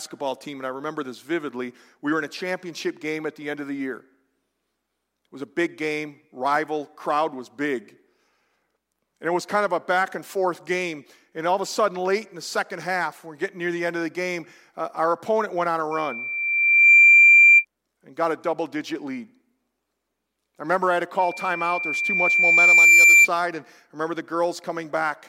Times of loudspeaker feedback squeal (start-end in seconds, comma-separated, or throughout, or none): 15.91-17.65, 21.19-23.28